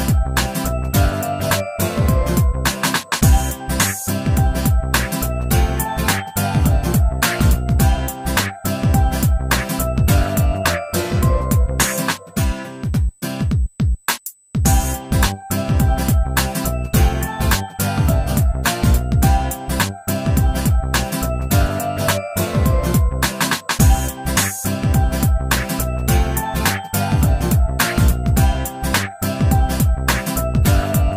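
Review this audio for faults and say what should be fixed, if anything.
USB whine runs through the whole clip as a steady tone at 8 kHz, sitting roughly 35 dB below the audio. The fixed pitch is the giveaway: 8 kHz matches the 125 microsecond microframe rate of a high-speed USB bus, whose periodic current draw is getting into the audio path through shared power or ground. The tone should be removed or the source re-recorded. To prevent it, power the interface separately or break the ground loop with an isolator or a better-filtered supply.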